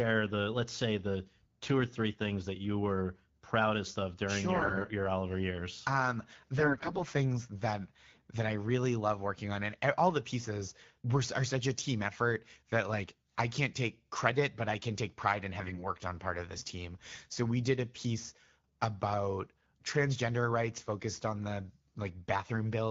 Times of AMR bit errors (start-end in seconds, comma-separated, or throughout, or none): 4.55-4.85, 6.58-7.03, 15.60-15.82